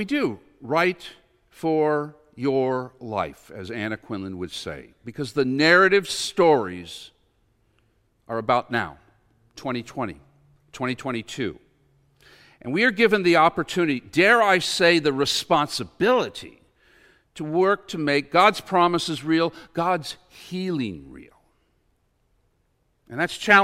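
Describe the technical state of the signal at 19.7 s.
At 19.7 s the speech signal is intact, with no audible technical fault at that moment.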